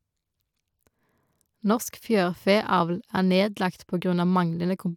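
No technical faults are audible.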